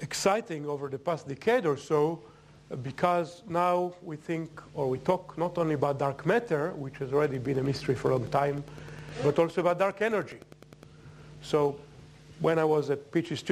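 A nearby Wi-Fi radio couples into the audio circuit from 7.24 s to 10.85 s, and the circuit rectifies the radio's beacon transmissions into audible pulses. This Wi-Fi interference repeats every 102.4 ms, so it comes through as an even, mechanical ticking just under ten times a second. It sits roughly 25 dB below the main sound and stops at 10.85 s.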